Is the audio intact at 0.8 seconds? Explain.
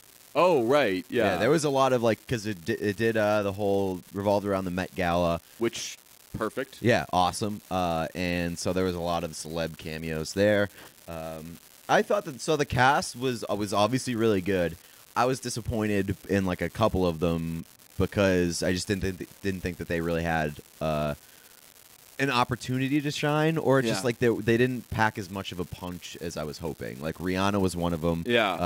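No. At 0.8 seconds the speech carries the unreliable data bit fault that runs through the whole recording. One data line is flaky, so its bit flips at random in a share of samples. Each flip adds a spike of fixed height, about -30 dBFS, and those spikes land at random. The result is a steady crackle or fizz under the speech, and it continues through the pauses, because it doesn't depend on the signal level.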